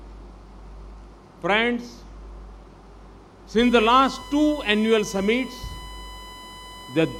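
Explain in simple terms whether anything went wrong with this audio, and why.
From 3.59 s to the end, a steady high-pitched tone at 1 kHz sits under the sound. This is USB whine: the USB connection draws power in regular one-millisecond bursts, and that rhythm leaks into the audio through the power or ground wiring.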